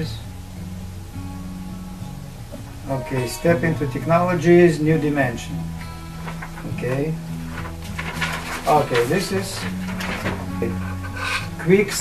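No technical faults are audible anywhere in the audio, so there are no times or causes to report.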